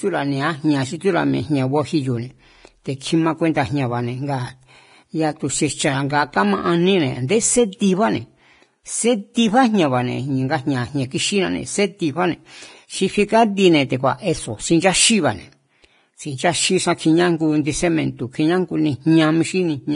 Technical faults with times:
0.00-19.95 Vorbis compression
7.28 pre-echo

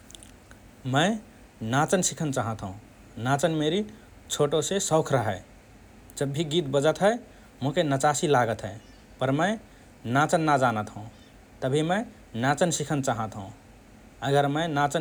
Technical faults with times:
none

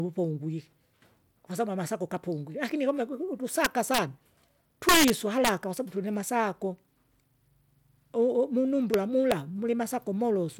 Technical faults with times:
3.65-3.98 integer overflow
4.89-5.49 integer overflow
8.94 integer overflow
9.32 integer overflow

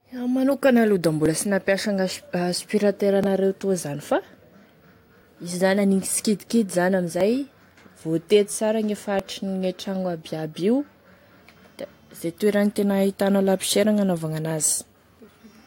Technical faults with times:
1.26 overlap between stream segments
3.24 overlap between stream segments
7.21 overlap between stream segments
9.19 overlap between stream segments

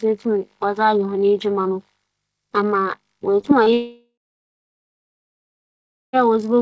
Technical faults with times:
3.41-3.69 short concealed packet loss
3.73-6.16 long network dropout

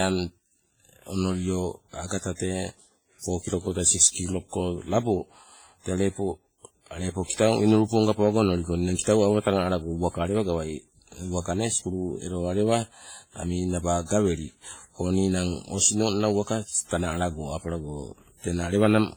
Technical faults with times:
0.00-19.17 WMA compression
8.97-9.07 pre-echo

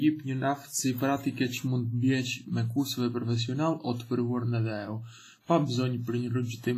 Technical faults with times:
0.00-6.78 WMA compression

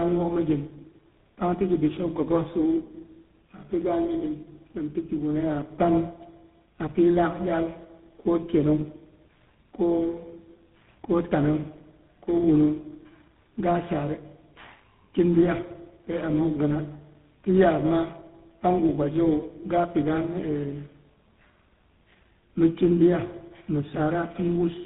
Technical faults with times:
0.00-24.85 tandem speech coding

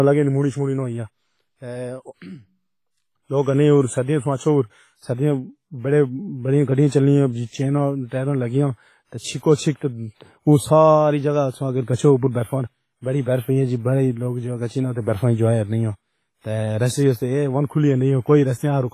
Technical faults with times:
0.00-18.93 WMA compression
9.18-9.43 pre-echo

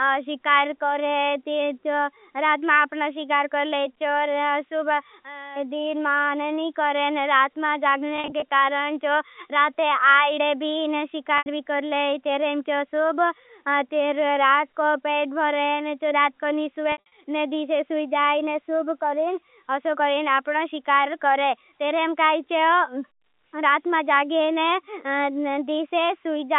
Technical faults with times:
8.16-8.42 packet loss with pitch repetition
11.38-11.46 packet loss with pitch repetition
16.92-17.12 packet loss with pitch repetition

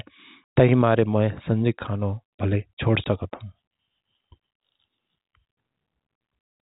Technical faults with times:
0.44-0.54 packet loss filled with silence
3.04-3.06 packet loss filled with silence
6.16-6.20 packet loss filled with silence

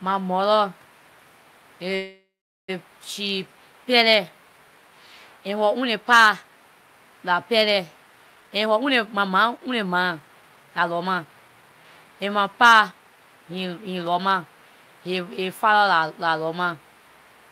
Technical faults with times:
1.95-2.70 call audio freeze
8.34-12.05 jitter buffer speed-up

